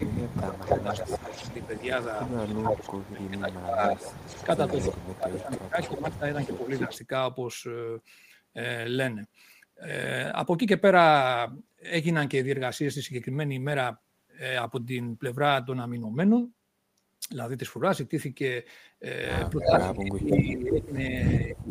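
From 0 to 1.46 s, again at 2.75 to 3.81 s and at 4.9 to 6.91 s, speech suppressed in double talk is likely at work: an echo canceller, unable to separate the talker from loudspeaker echo while both sides speak, turns everything down. The speech dips by up to about 15 dB at first, then about 20 dB, for roughly a second each time.

Across 0.28 to 6.99 s, echo leak is likely: a loudspeaker's pickup gets past the canceller and returns, so a copy of the speech trails 289 ms behind at about 10 dB below it.

From 19.51 s to the end, suppression returns, cutting the speech by up to about 25 dB. From 19.61 s a louder leaked echo, about 5 dB under the speech and delayed by 329 ms, rides alongside.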